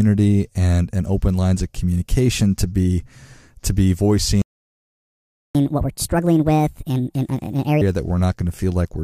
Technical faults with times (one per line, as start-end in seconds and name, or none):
4.42-5.55 playback stall
5.55-7.81 catch-up at higher speed